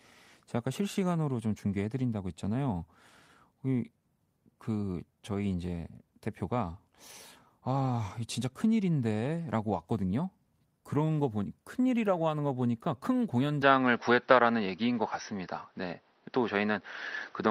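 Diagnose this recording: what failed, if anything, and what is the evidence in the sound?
At the driver and device stage, the input likely switched to a poorer device at 13.62 s. From there to the end, speech has nothing above 6 kHz, level shifts by about 5 dB, and a new noise floor sits about 40 dB down, with no silence. A spectrogram shows a sudden ceiling.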